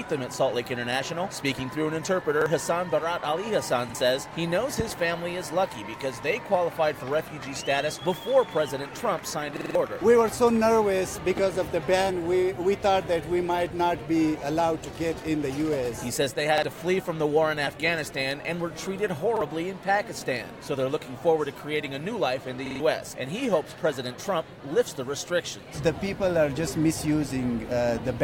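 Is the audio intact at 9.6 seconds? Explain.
No. A repeated buffer runs from 9.57 to 9.75 s: fresh audio arrived late, so the device replayed its last piece, about 46 ms long, which fits a 2048-sample buffer, four more times. It is heard as a hard-edged stutter, with roughly a fifth of a second of audio lost.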